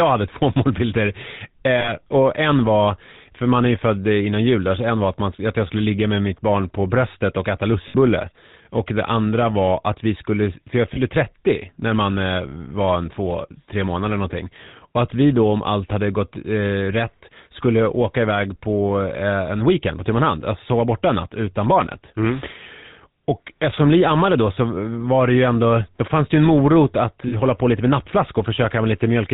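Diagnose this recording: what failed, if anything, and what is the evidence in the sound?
GSM full-rate codec, throughout the speech. The codec stage is the failure here. Everything above 4 kHz is gone, and the voice carries a plainly audible buzzy, gravelly roughness. That comes from a vocal-tract model driven by a sparse, regularly spaced pulse excitation that keeps only one sample in three. This coarse coding fits the 13 kbps full-rate scheme, and it strips the fine texture from the voice.

Lost GSM frames occur at 1.8–1.91 s, just before "och en var för", at 7.88–7.96 s, right after "på bröstet och äta", at 10.94–10.98 s, after "vi skulle för jag", and at 27.28–27.35 s. Each one is a short, rough, metallic ring. The gaps of 40, 60, 20 and 40 ms fit runs of two, three, one and two dropped 20 ms frames. The decoder fills each gap by reusing the last good frame's settings.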